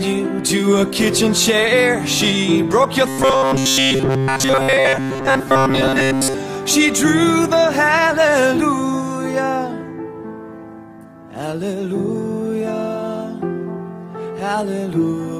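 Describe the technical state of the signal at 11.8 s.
The signal is intact at 11.8 s, with no audible technical fault at that moment.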